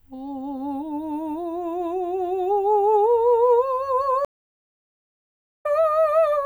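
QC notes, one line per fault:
4.25–5.66 s, stream reconnect: the music drops out for about 1.4 s as the connection breaks and the player restarts its decoder mid-stream, resuming roughly half a second further on. On the waveform it is a flat gap; the spectrogram shows a blank band and a misaligned restart.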